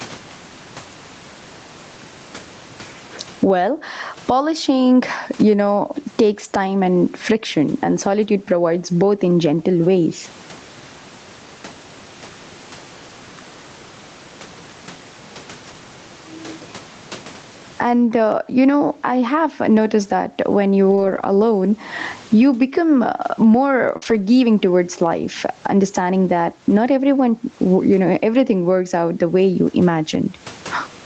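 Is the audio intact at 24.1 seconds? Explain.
No. The audio is not intact at 24.1 seconds. A lost packet rebuilt from error correction covers 24.02 to 24.20 s, between "you become uh more" and "towards life understanding that". About 100 ms of audio failed to arrive, which fits five 20 ms Opus packets. Each following packet carried a low-bitrate backup copy, and the decoder played those instead of leaving a gap. The rebuilt stretch sounds rougher and noisier than the audio around it, with no silence.

Just before this, short concealed packet loss at 23.97 to 24.04 s left about 40 ms missing. The receiver filled it by extending the preceding sound, from its pitch where voiced and with shaped noise where not, then faded back into real audio. It is heard as a brief smear or wobble leading into the rebuilt section, and a short consonant there can drop out.

Gain pumping runs through the whole clip, including this moment. 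The gain swings by around 20 dB. This is likely caused by gain set far too high for the microphone, with a fast limiter pulling it down on each loud passage and squashing loud and soft parts together.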